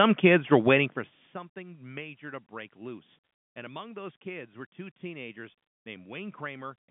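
No technical faults can be heard in this recording.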